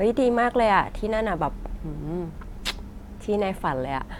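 A speech recording, and nothing is technically wrong with it.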